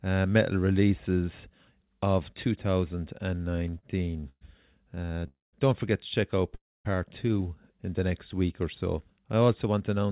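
Repeated stalls (stutter) run from 3.56 to 4.43 s (nine gaps, the longest 119 ms) and from 4.91 to 5.24 s (five short gaps). Late packets kept emptying the jitter buffer, and the receiver stretched the last sound, so the audio drags and stutters.

A call audio freeze at 5.28 to 5.55 s, just before "don't forget to check", inserts a 251 ms hold that fades to about 170 ms of silence. A second freeze at 6.55 to 6.87 s, between "forget to check out" and "two in the next", adds 300 ms, 250 ms of it silent. Each is likely an emptied jitter buffer awaiting delayed packets.

A jitter buffer speed-up from 9.11 to 10.11 s trims about a tenth of a second of pitch periods, so the speech runs at 111% speed with unchanged pitch. Nothing is heard above 4 kHz on the G.711 call path.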